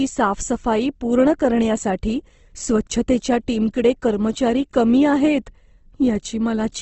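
From start to finish the speech sounds rough and grainy, with a noisy, sandpapery texture in place of clean tone, and nothing reaches above about 8.2 kHz, so the top end is dull. The likely cause is Opus compression in its music (CELT) mode at a low bitrate, consistent with roughly 16 kbps. Short of bits, the encoder kept each band's energy but filled detail with copied or noise content, trading clarity for grit.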